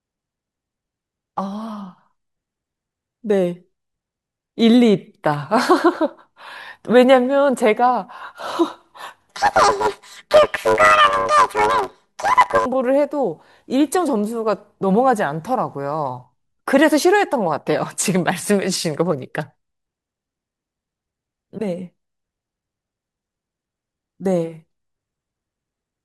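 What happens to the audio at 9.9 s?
From 9.30 to 12.66 s, planar audio is read as interleaved. Each 10 ms block plays left then right at double speed, giving a robotic 100 Hz buzz with no octave shift, unlike a sample-rate error.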